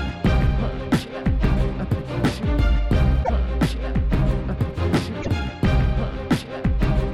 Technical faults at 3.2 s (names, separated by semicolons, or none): repeated frames